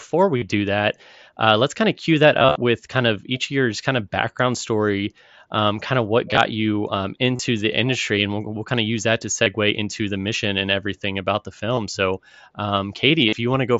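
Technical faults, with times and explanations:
0.37–0.42 s, 2.39–2.56 s, 6.31–6.37 s, 7.36–7.39 s, 9.44–9.46 s, 11.75–11.77 s and 13.29–13.33 s, concealed Bluetooth headset packet loss: packets from the headset went missing, and the phone filled each gap by looping a closely matching slice of the preceding waveform. The short gaps of 22.5 to 45 ms are 3 to 6 lost frames each. At 2.39 s, 112.5 ms of audio was lost in bursts of up to 30 ms spread over 165 ms, and it comes through as a brief buzzy, steady-level tone that warbles as real sound resumes.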